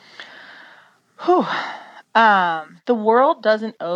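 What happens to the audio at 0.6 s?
Nothing goes wrong at 0.6 s; the speech there is intact, with no dropout, click, distortion or other fault.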